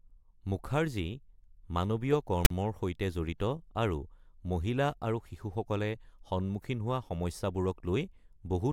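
At 2.45 to 2.50 s, file tags played as audio. Text metadata is read as samples, giving an offset rasp, then padding silence, just before "সৈতে জড়িত আৰু মহিলা".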